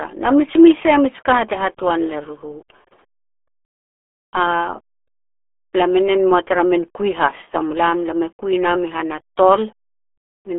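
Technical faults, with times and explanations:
Throughout: RealAudio 14.4 codec. The speech is confined to a narrow band, roughly 300 Hz to 3.4 kHz, with nothing above 3.8 kHz, and it carries heavy gargling, muffled coding damage. The level of degradation fits an 8 kbit/s speech codec built for dial-up modems, which models the voice coarsely instead of preserving the waveform. Plain telephone band-limiting would narrow the sound without adding that watery, smeared texture.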